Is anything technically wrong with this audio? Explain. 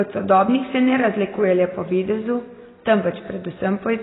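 Yes. Throughout the speech there is heavy AAC compression damage, likely from AAC-LC coding at a bitrate near 16 kbps. Starved of bits, the encoder drops everything above 3.9 kHz and coarsely quantises what remains, so the audio sounds dull and smeared, with fizzy, warbling sibilants.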